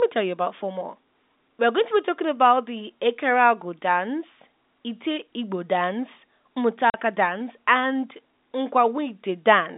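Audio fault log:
6.90–6.94 s: packet loss filled with silence. A 40 ms hole cuts through the speech just before "dance and", which fits two lost 20 ms packets. The receiver played dead silence in their place, so the gap opens and closes with hard edges, all within a narrow telephone band.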